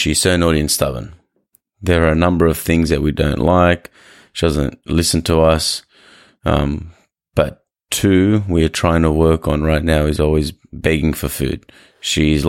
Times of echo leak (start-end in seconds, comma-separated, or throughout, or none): none